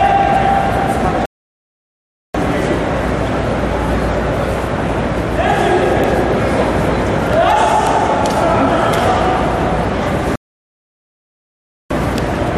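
A rebuffering stall occurs twice: from 1.26 to 2.35 s, adding about 1.09 s, and from 10.36 to 11.91 s, adding about 1.55 s. Each time the sound drops to silence and then continues from exactly the point where it stopped. The player had exhausted its downloaded audio and paused until more data arrived. No content is lost, but the clip runs longer by the duration of both gaps.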